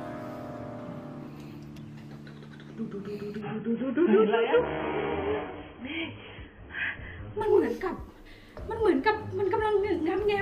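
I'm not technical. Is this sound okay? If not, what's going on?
No. From 3.4 to 7.4 seconds there's an adaptive stream at a lower bitrate: the connection slowed, so the player switched to a lower-quality copy. Everything above 3.4 kHz disappears, making the sound dull and muffled, then full quality returns suddenly without any gap.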